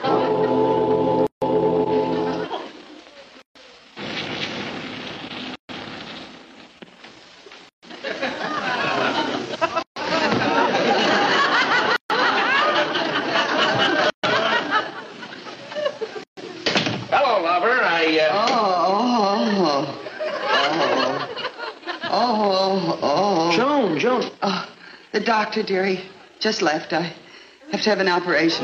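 Short silences cut into continuous sound at 1.27, 3.42, 5.55, 7.69, 9.83, 11.96, 14.10 and 16.24 s, the first lasting 152 ms and the rest 136 ms, after which the sound resumes where it stopped. This is a gap at a join of encoded pieces: roughly two-second segments were encoded separately and concatenated without trimming each one's start delay and final-frame padding.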